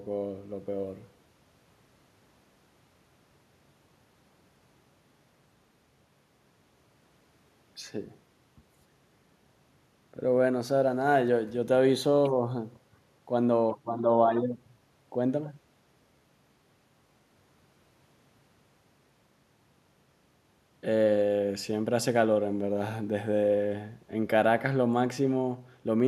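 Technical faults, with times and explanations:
No technical faults can be heard in this speech.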